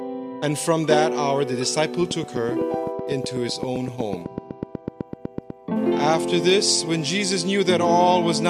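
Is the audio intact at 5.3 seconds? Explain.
No. A train of clicks runs from 2.11 to 5.51 s, likely from electrical interference or a faulty connection or power supply injecting pulses. Around thirty near-identical clicks arrive at a steady 8 per second, popping about 10 dB above the sound.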